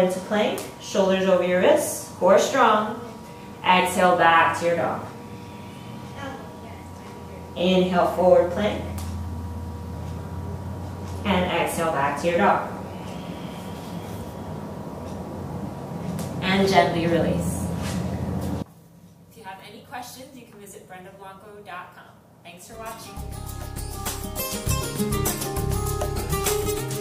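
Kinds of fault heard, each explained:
One channel inverted, from 18.62 s to the end: the level abruptly falls by about 22 dB, likely because one stereo channel has reversed polarity, so everything common to both channels cancels in the mono sum and only their faint difference remains.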